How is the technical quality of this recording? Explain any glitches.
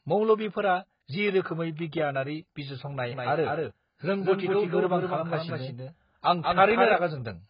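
The technical quality is poor. The speech is heavily degraded by coding throughout, and a delayed duplicate runs through its second half.

Across the whole clip the speech sounds dull and smeared, with nothing above 5 kHz and a warbling, fizzy texture on sibilants and held sounds. The likely cause is AAC compression at a very low bitrate, pointing to around 12 kbps. The encoder lowered its cut-off and starved the remaining bands.

From 3.11 to 6.93 s a doubled audio track appears, starting and stopping abruptly. A full-band copy trails the original by roughly a fifth of a second, a few dB quieter, with no decay or room colour. It is likely a second, slower capture path, or an edit overlapping two out-of-step copies.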